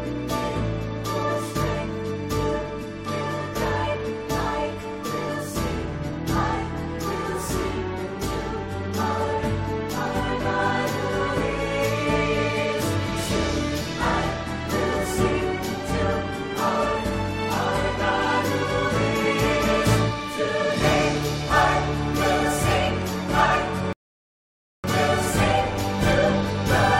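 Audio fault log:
23.93–24.84 s, rebuffering stall: playback used up its downloaded audio and halted until more data arrived, so the sound drops abruptly into about 0.91 s of silence, then picks up exactly where it stopped, with nothing skipped but that much time added.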